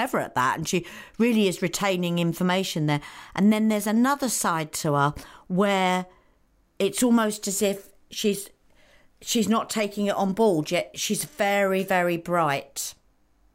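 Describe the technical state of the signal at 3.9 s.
At 3.9 s the signal is intact, with no dropout, distortion, glitch or other technical fault audible at that moment.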